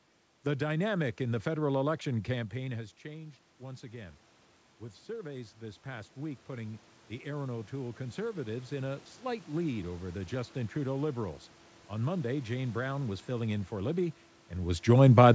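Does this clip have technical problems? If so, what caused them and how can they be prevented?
Yes. Automatic gain rising occurs from 2.34 to 4.27 s (about 4 dB) and from 4.78 to 10.2 s (about 9 dB), as the control compensates for an input drop of about 16 dB. Unlike a talker moving closer, the room noise swells along with the speech. Preventing it means keeping a steady microphone distance or limiting how fast and how far the gain control may boost.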